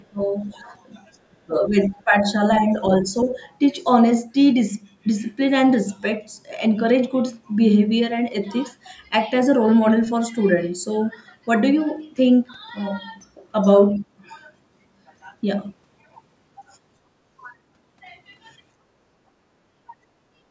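Right from the start, 0 to 0.64 s, the speech dips by something like 15 dB, and a faint second voice, around 35 dB down, slips in at 0.45 to 0.54 s. That's likely speech suppressed in double talk, with the other side's voice leaking through: the echo canceller couldn't separate the two talkers, so it pulled the level down and let a trace of loudspeaker sound past.

The same thing happens harder from 1.18 to 3.37 s. The talker drops by roughly 25 dB for about a second in total, and from 1.83 to 2.32 s the leaked voice sits roughly 30 dB under the speech.

Near the end, from 18.74 to 19.6 s, the room sound falls away by about 21 dB for around half a second and then returns. That's the background gated by the echo canceller, clamping the microphone while the loudspeaker plays.

At 19.9 s there's a brief dip in the speech of roughly 15 dB, likely another double-talk suppression.

Then from 20.24 to 20.47 s the background is gated again, by about 17 dB.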